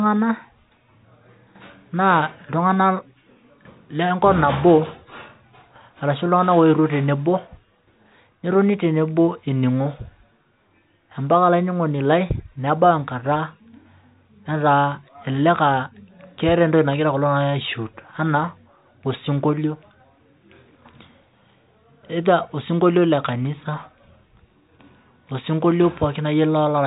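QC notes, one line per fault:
No faults heard.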